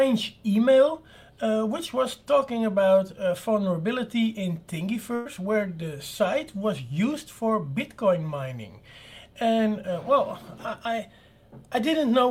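The audio has one burst of packet loss, from about 5.15 to 5.27 s. For roughly 98 ms the last sound before the gap is held, then fades out. That is the receiver's concealment stretching what it had while nothing new arrived. When the stream returns, about 100 ms of audio has been skipped. The jump cuts straight into later material. The cause is several consecutive packets lost or arriving too late for playback.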